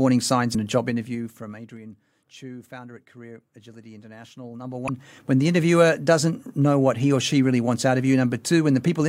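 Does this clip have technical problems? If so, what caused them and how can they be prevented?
Yes. At 0.54 s and again at 4.88 s, part of the compressed speech stream arrived as damaged data: bytes in those frames were lost or overwritten, so the decoder could not parse them, lost frame sync and skipped forward to the next valid header. Each event is heard as a brief chirp or blip, the second just before "when the interviewer doesn't". Preventing it means using a transport with checksums or error correction and validating files before decoding.

From 4.39 to 5.22 s, a level change of roughly 20 dB was applied in coarse 2 dB steps, about ten per second, with no interpolation between steps. Each sudden jump puts a small discontinuity into the waveform, so a ticking zipper noise rides on the speech while the level moves, leading into "when the interviewer doesn't". Ramping gain per sample, or smoothing it over each buffer, prevents this zipper noise.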